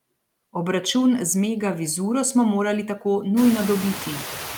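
Throughout the speech, the noise suppressor is at work, producing noise suppressor artifacts. Frame by frame it judges which frequency bands hold steady noise and pulls them down, but only by about 2 dB, so it barely tames the background. The leftover noise dips slightly in the gaps and comes back up under the speech, giving a faint pumping. This matters most after the room noise swells by about 22 dB around three and a half seconds, leaving it only about 14 dB below the speech.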